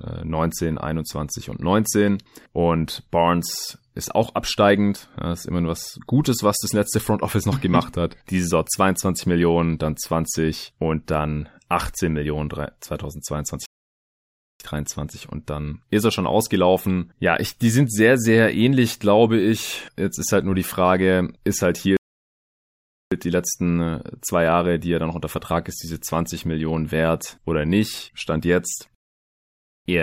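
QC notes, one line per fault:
13.66–14.60 s, playback stall: the speech cuts to silence for about 0.94 s, then resumes. The player was likely starved of data or had its output thread blocked.
21.97–23.12 s, playback stall: after "ist halt" the output goes silent for about 1.15 s before continuing with "die letzten", a gap likely while the player waited for its buffer to refill.
28.95–29.86 s, playback stall: a silence of about 0.91 s interrupts the speech, which picks up again with "eher nicht" once the output recovers.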